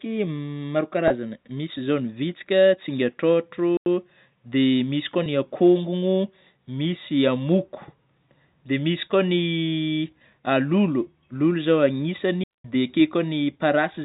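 At 1.08 to 1.10 s a brief buzzy hold smears the speech, a packet loss with pitch repetition: about 20 ms went missing, which fits a single lost packet, and the receiver repeated the last pitch period to fill it. At 3.77 to 3.86 s a clean 92 ms hole of near silence opens just before "dia misy koa ny", with no noise burst on either side. This is a digital wireless dropout, where the link lost too much data and the receiver muted. The same held, buzzy patch recurs at 5.24 to 5.26 s, between "dia misy koa" and "ny akongono misy amoko", again about 20 ms bridged by repeating a pitch period. At 12.44 to 12.65 s a longer silent gap of about 210 ms is another wireless dropout mute. Throughout, the G.711 telephone band cuts everything above 4 kHz.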